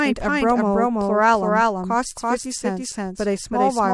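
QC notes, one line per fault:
Throughout: doubled audio track. The speech was likely captured twice, through a second, slower path or an edit holding two copies out of step, so an identical full-band copy trails roughly 300 ms behind at about equal level, repeating every syllable with no decay or room colour.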